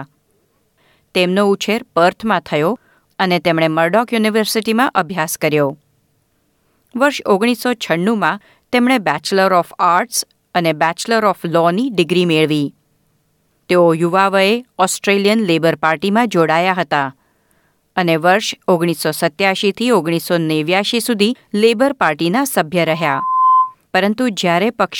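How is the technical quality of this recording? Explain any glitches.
One fault: loudspeaker feedback squeal from 22.87 to 23.75 s. A 1 kHz tone swells over most of a second to a few decibels above the speech, as the mic-to-speaker loop exceeds unity gain.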